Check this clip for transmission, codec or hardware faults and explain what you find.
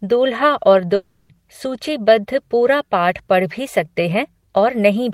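There's one fault here, a long network dropout. From 0.95 to 1.31 s, after "दूल्हा और", the sound smears into a fading buzz for about 340 ms and then picks up again at "सूचीबद्ध पूरा पाठ पढ़". That's likely packets not arriving, with the receiver stretching the last sound to cover the gap, so the part in between is gone.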